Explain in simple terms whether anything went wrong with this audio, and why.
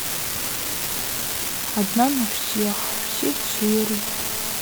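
A steady crackle or fizz runs under the speech from start to finish, even in the pauses. This is an unreliable data bit: one digital line is flaky, so random samples flip, each making an identical click.

From 2.49 to 4.57 s a hard, raspy buzz joins in, holding steady. This is GSM phone buzz: a nearby phone on a call sends radio bursts 217 times a second, which the audio circuitry picks up as sound.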